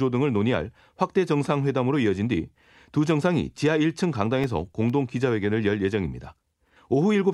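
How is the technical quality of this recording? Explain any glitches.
The recording has one glitch, a short run of CD scratch ticks. From 4.21 to 4.90 s there are four ticks, roughly five or six per second, each no longer than about a millisecond. A scratch or blemish on the disc damages more data than the error correction can rebuild, once per revolution, and the player patches or mutes those few samples. In this speech clip that is heard as a brief, evenly spaced clicking.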